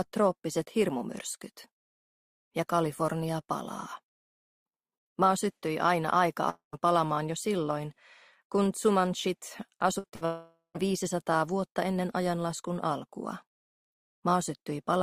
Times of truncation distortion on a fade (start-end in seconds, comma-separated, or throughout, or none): none